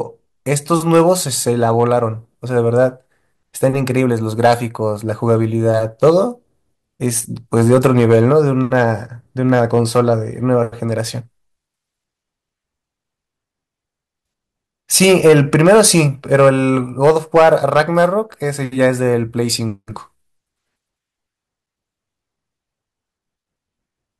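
Throughout the speech, hard clipping, overdriven about 6 dB, squares off under one percent of samples: flat-topped waveform peaks, high-frequency spectrogram smears, crackle.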